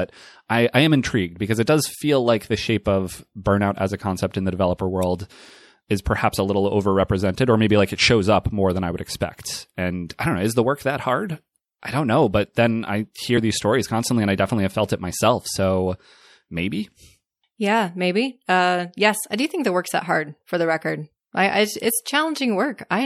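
Speech recording with plainly audible MP3 compression throughout, the likely cause of its coarse, watery texture. Weaker spectral detail flickers on and off between frames, so sibilants turn swirly and metallic while consonant onsets lose their crispness. The degree of damage is consistent with an encode at around 64 kbps, where too few bits are available to cover the full band cleanly. At 13.37 s there are compressed frames skipped: the audio jumps forward by roughly one frame, a gap on the order of 30 ms, which matches a single 26.1 ms MP3 frame going unplayed. Because adjacent MP3 frames overlap, the splice is heard as a short smeared blip rather than a sharp click, with a small piece of the sound missing across the jump.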